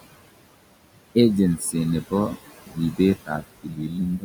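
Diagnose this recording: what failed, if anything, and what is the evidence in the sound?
The call-processing stage failed: the noise suppressor is pulling down the room noise, which sits about 14 dB below the speech, by about 20 dB, frame by frame. The result is noise suppressor artifacts throughout. The background sinks between phrases and swells back under speech. On a spectrogram the noise floor shows as patchy, blinking cells that vanish in pauses rather than a smooth, steady band.

The same suppressor also cuts speech, at 2.67–3.0 s, 3.16–3.42 s and 3.63–3.98 s. Quiet parts of the speech there fall below its noise threshold, so it attenuates them by up to about 16 dB, for roughly 150 ms, 100 ms and 300 ms of each stretch. The cut speech sounds swallowed or faint. The waveform shows sudden dips in the envelope, and the spectrogram shows speech energy that fades in those stretches.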